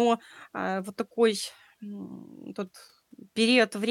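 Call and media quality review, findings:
No audible faults found in the speech recording; nothing to action.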